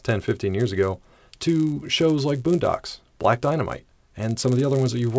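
Throughout, a 100 Hz buzz rides under the speech: the resampler restarted on every block, which fits 10 ms blocks converted from 48 kHz to 16 kHz, leaving an edge error each time.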